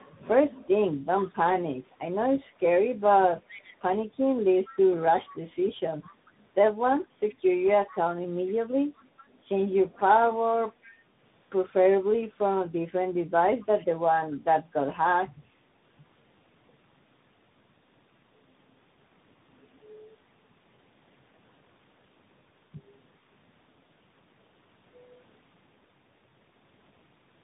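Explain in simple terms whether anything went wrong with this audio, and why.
Tandem speech coding runs through the whole clip, from start to finish. The call passed through several phone networks in a row, and two of them squeezed the speech with their own compression, a mobile-style coder first and a CVSD coder last. Each one had to work on speech the previous one had already roughened. That stacking leaves the speech muffled, with nothing above about 3.8 kHz, and gives it a grainy, warbling edge.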